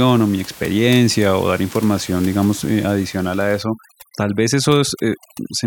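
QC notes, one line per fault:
3.63–5.67 s, overdone noise removal: aggressive spectral gating mutes bands near the noise floor, leaving twinkling residue over about 21 dB-down room noise and taking quiet parts of the speech with them.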